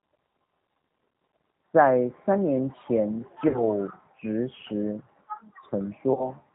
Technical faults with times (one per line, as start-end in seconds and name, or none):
0.00-6.54 G.729 codec
1.12-1.15 VoIP packet loss concealed by the speech codec
3.48-3.62 VoIP packet loss concealed by the speech codec
6.14-6.30 VoIP packet loss concealed by the speech codec